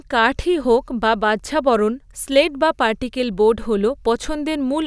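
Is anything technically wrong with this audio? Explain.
No, nothing technically wrong can be heard here.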